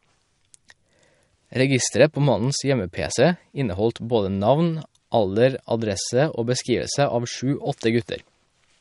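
Throughout, the speech has nothing above 11.2 kHz and sounds watery and swirly, with smeared consonants, likely MP3 compression at a bitrate that sounds near 52 kbps.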